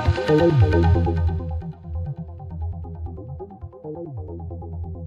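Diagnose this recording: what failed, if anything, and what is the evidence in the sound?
Zipper noise runs from 0.91 to 1.68 s, where the level falls by roughly 15 dB through a ticking of about 40 small clicks per second. The gain was stepped once per buffer in the driver or processing chain, without smoothing. Unlike crackle, the ticks stop once the level settles.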